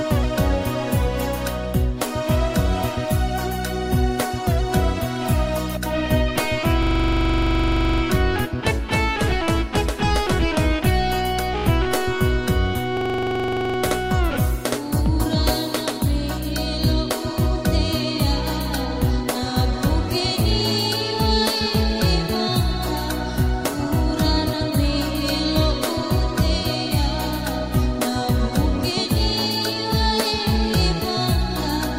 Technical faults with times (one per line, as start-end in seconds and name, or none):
6.83-8.02 system hang loop
12.97-13.78 system hang loop